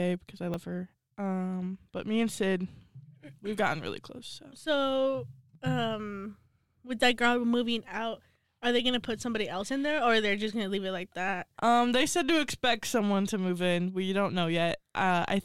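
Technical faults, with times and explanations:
0.54 s, dropped buffer (overrun): right after "because I" the speech jumps forward with no gap, missing roughly 20 ms of sound. The likely cause is samples not being read before the hardware overwrote them.
12.5 s, dropped buffer (overrun): a similar skip falls between "they said to" and "someone to move in", again with about 20 ms lost and the two sides of the gap joined directly.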